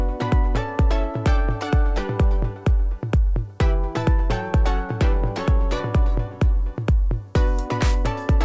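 No technical faults are audible.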